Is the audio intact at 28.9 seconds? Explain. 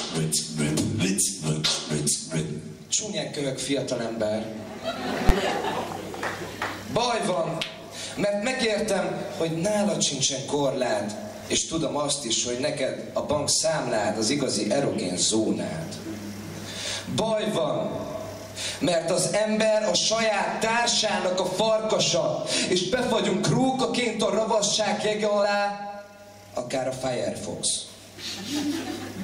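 Yes, the audio is intact at 28.9 seconds, with no dropout, glitch or other fault at that moment.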